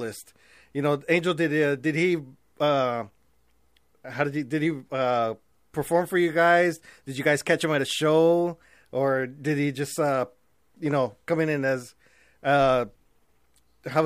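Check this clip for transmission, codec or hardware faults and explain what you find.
No transmission, codec or hardware faults.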